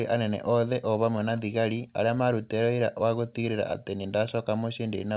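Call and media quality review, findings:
No faults found; speech passes the call path as expected.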